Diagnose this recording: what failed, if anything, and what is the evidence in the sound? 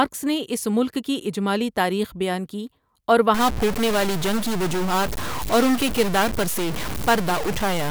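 From 3.34 s to the end, the speech turns harsh and buzzy, and the pauses fill with noise. That's likely a stuck bit at the converter or its data line. A step of around -25 dBFS shifts roughly half the samples, flipping with the sign of quiet passages.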